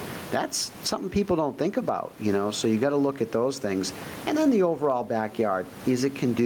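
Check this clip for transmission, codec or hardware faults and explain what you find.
Gain pumping runs through the whole clip. Input gain is set far too high, and a fast limiter, likely, pulls it down by roughly 20 dB on each loud sound. The room noise sits about 29 dB below the speech, and the speech sounds squashed.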